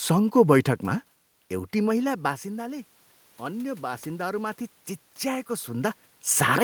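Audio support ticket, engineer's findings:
Automatic gain rising, 1.50 to 4.64 s. Talker moves away near 1.5 s, and input drops about 13 dB. AGC slowly raises gain about 5 dB over three seconds. Room noise swells with the voice. Another talker movement near 5.5 s.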